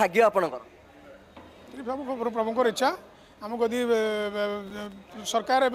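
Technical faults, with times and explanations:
4.67–4.93 s, loose connector crackle: a bad contact breaking and remaking chops the signal into an irregular scratchy burst.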